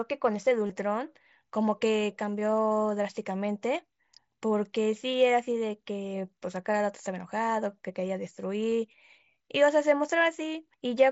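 Speech, with concealed Bluetooth headset packet loss at 0.67 to 0.70 s and again at 8.71 s. Each dropout spans about 22.5 ms, which fits three lost frames. The receiver filled each one by repeating the best-matching recent stretch of waveform, so a brief buzzy tone holds at full level, then a slight warble marks the return of real audio. On a waveform the patch shows as a short run of near-identical repeating cycles with no dip in level. On a spectrogram it appears as evenly spaced, frozen harmonic stripes rather than a gap, all beneath the 8 kHz ceiling of the mSBC wideband link.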